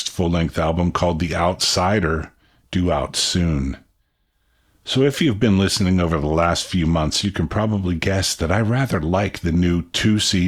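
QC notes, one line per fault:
No faults heard anywhere in the clip.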